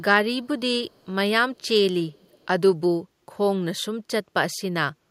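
At 0.9 to 1.06 s and again at 2.1 to 2.47 s there's an echo leak: a faint copy of the speech trailing 331 ms behind, about 40 dB down, then about 35 dB. Likely a far-end loudspeaker whose echo canceller let some through.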